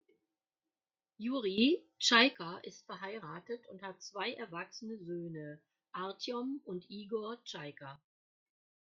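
At 1.58 s the level leaps by about 12 dB in a single step, a sudden gain jump that holds until 2.35 s, just before "ist verheiratet und hat", then drops back. At 7.96 s it falls by about 14 dB and stays down to the end. Speech and background noise shift together, which likely points to digital gain applied without a ramp. The waveform shows sharp vertical edges in its envelope, and the spectrogram brightens or darkens uniformly across all frequencies.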